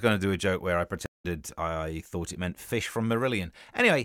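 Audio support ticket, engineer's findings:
Speech drops out 1.06 to 1.25 s, after "a joke where I": about 0.18 s of dead silence, then resumes at "I thought it meant", roughly 150 ms further on. Stream reconnect: link dropped, player rejoined the live stream with a fresh decoder, skipping ahead.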